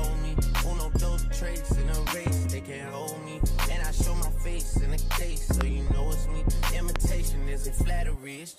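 A voltage spike, likely from a plug, a switch, static or a driver glitch, has been added to the signal twice, producing a loud pop each time. The first lands at 5.61 to 5.63 s and the second at 6.96 to 6.98 s. Each is a single sharp pop lasting about 20 ms, peaking roughly 15 dB above the surrounding sound. The sound carries on underneath both pops without a break.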